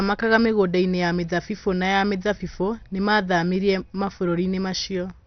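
From start to finish the speech sounds dull and gurgly, with nothing above about 6.2 kHz and a granular, watery roughness on top. That's most likely heavy MP2 compression. Layer II splits the sound into 32 sub-bands and shares out bits among them. Starved of bits, as a rate around 48 kbps would leave it, the upper bands get switched off and the surviving ones are quantised coarsely, so they flicker and grind.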